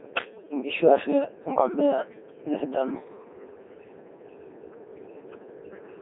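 Speech passed through a Codec 2 vocoder, which suits its 2.4 kbit/s mode: resynthesised from pitch and envelope, it sounds robotic and buzzy, band-limited to roughly 250 Hz to 3.6 kHz. From 0.36 to 0.49 s, bit errors on digital voice radio, consistent with around five percent corrupting about four frames, throw pitch, level and timbre into warbling gibberish.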